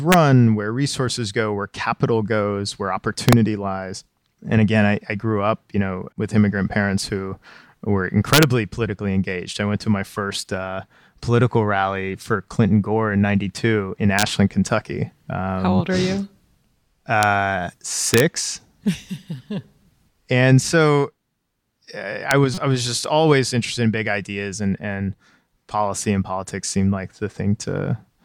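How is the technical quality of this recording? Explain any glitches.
The speech recording has two recurring faults, integer overflow and corrupt frame decoding, each producing brief, sharp disturbances.

Integer overflow occurs at 0.12–0.14 s (just before "where resources go where"), 3.29–3.33, 8.33–8.43, 14.19–14.23, 17.23, 18.14–18.20 and 22.31 s. Loud peaks exceed the limit by about 1 dB or less and wrap to the opposite sign, heard as violent cracks. On the waveform the peaks jump abruptly from one extreme to the opposite one.

A corrupt frame is decoded at 10.17 s, between "I went to my" and "uh political rally for", and again at 22.54–22.63 s, before "was just always interested". The damaged frames put energy at the wrong frequencies. The first burst is quieter, and the second is much louder. Both appear on a spectrogram as short, misplaced bursts of energy.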